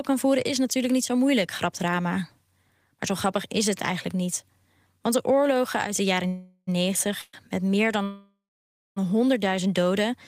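Call audio freezes at 6.27–6.69 s, 7.21–7.35 s and 8.03–8.98 s stretch the last sound into a fading buzz or hiss, likely from delayed packets draining the jitter buffer. On a spectrogram each shows smeared, frozen bands. The longest ends in about 0.6 s of flat silence before the speech resumes intact.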